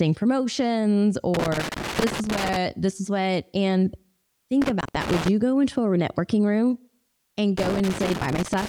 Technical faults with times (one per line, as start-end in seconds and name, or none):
1.34-2.56 loose connector crackle
4.62-5.28 loose connector crackle
7.57-8.69 loose connector crackle